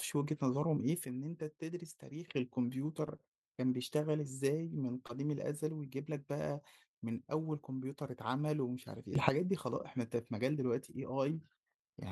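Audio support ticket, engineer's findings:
Sudden gain jump, 1.05 to 2.28 s: level drops about 9 dB, speech and noise floor together, then recovers. At 9.15 to 9.29 s, a step up of about 12 dB. Likely a digital gain setting applied without a ramp.

Short stall from a late packet, 3.17 to 3.21 s: packet late, jitter buffer ran dry, and the last sound was held for 21 ms. No content lost, but playout delay grows by 21 ms. Audible as a brief hold or buzz.

Short concealed packet loss, 5.07 to 5.11 s: 20 ms never reached the decoder. Concealment continues the preceding sound for 19 ms, then blends back, giving a brief smear or wobble.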